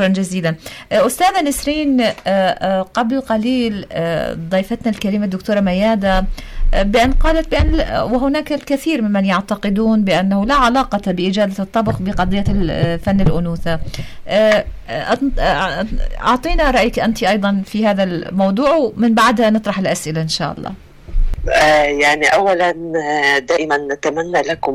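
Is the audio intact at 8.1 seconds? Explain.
Yes, the audio is intact at 8.1 seconds, with no dropout, click, distortion or other fault at that moment.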